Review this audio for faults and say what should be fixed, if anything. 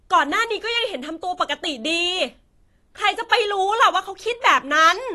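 Throughout the speech, nothing is heard above 12.1 kHz and the sound is dull and smeared, likely AAC compression at a low bitrate near 32 kbps. Encode at a higher bitrate, or distribute from an uncompressed master.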